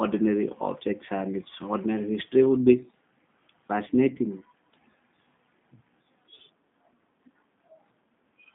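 G.729 codec damage runs through the whole clip. The speech passes through a narrow line band of roughly 150 Hz to 3.6 kHz, so there is no low body and no upper presence. The codec rebuilds the speech from a vocal tract filter, a pitch predictor and a few pulses per half-frame rather than from the waveform itself. That leaves a plainly rough, slightly synthetic edge, consistent with an 8 kbit/s G.729A stream.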